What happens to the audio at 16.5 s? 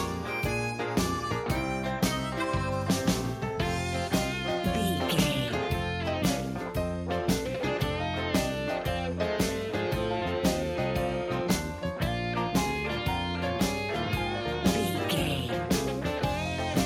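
Nothing goes wrong at 16.5 s; the audio carries on intact through that moment.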